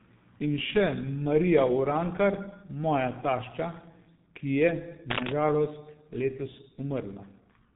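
From start to finish the speech carries the heavy damage of the G.723.1 codec. Nothing reaches above 3.8 kHz, so the voice is muffled, and the coder's slowly updated voice model and long 30 ms frames leave a hoarse, rough texture with smeared consonants. The damage fits a rate near 6.3 kbit/s. Unlike a plain low-pass filter, which only dulls the sound, this codec also roughens the voice itself.

From 5.1 to 5.32 s, just before "žalost letos", a burst of cable scratch noise rides over the speech at about the same loudness as the voice. It is a dense, irregular scratching and rustling, most likely from a worn cable or connector being moved so that its contact resistance jumps about rapidly. Its uneven, crackling grain sets it apart from a single click or a steady hiss.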